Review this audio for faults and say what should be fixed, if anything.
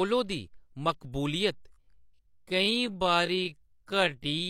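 Time-stretched section, from 1.5 s to the end at 4.5 s: the speech abruptly slows to about 0.59 times its pace while pitch stays unchanged, so it drags. This is likely software lengthening the audio by repeating short pieces to fill a target duration. To prevent it, edit or pad the surrounding timeline to fit the length instead of stretching the recording.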